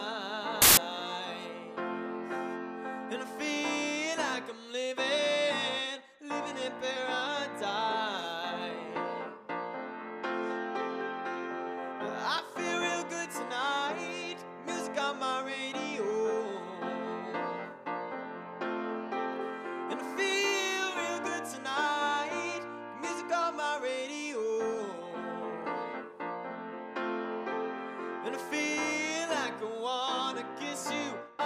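The audio breaks into loud, harsh broadband noise from 0.62 to 0.77 s, a case of samples built from the wrong bytes: each value was assembled misaligned or byte-swapped, so its fast-changing low bits dominate. Unlike clipping or a dropout, the result is noise rather than distortion or a gap.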